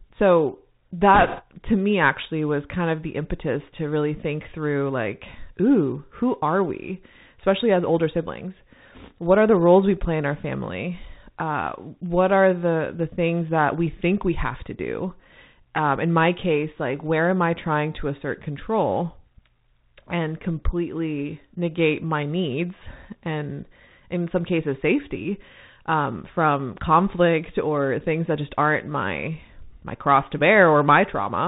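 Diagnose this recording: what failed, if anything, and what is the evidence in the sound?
The whole thing's been through a Bluetooth CVSD headset codec. It's narrowband, with nothing above 4 kHz, s sounds come out scratchy, and a grainy hiss sits underneath. That's the one-bit up/down delta coder with adaptive step size, consistent with a 64 kbps CVSD stream.

Then there's a short burst of bit errors on the Bluetooth voice link from 1.14 to 1.42 s, right before "to me actually was". It's a rushing crackle with no sharp clicks, because each flipped CVSD bit only nudges the signal, and the error rate is a few percent.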